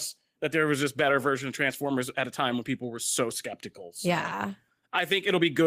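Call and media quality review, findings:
No faults found in the speech clip. Nothing to raise against any capture, transport or playback component.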